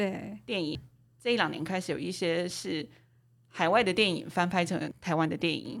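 Damaged data in the compressed stream hits at 0.75–0.78 s and 4.91–4.94 s: corrupt frames knock the decoder out of sync, giving short blips.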